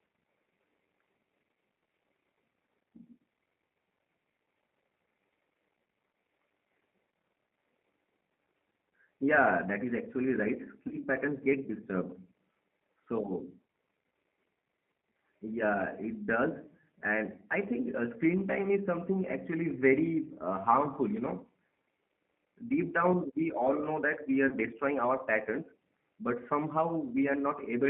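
G.729 codec compression runs through the whole clip: the speech is squeezed into a narrow line band of about 150 Hz to 3.6 kHz and rebuilt at 8 kbit/s from a vocal tract filter and sparse pulses, leaving it plainly rough and synthetic.

VoIP packet loss concealed by the speech codec occurs twice, from 10.88 to 10.95 s, between "that is actually right" and "patterns get disturbed", and from 24.48 to 24.55 s, between "we are" and "our patterns but". Each time about 30 ms of audio went missing, which fits a single lost packet. The decoder extends its last pitch and filter into a fading buzzy tone or coloured noise, and the voice stays weakened briefly afterwards.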